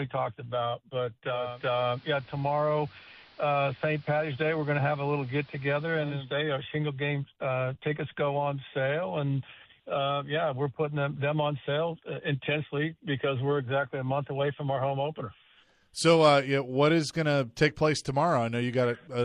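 A hybrid receiver lost its digital stream at about 1.24 s and blended over to the station's AM analogue broadcast, returning to digital at about 6.37 s. Each cross-fade takes roughly 423 ms. During the analogue stretch the audio is band-limited, so it turns dull and muffled. A steady hiss sits roughly 30 dB under the signal, and the overall level shifts by about 1 dB.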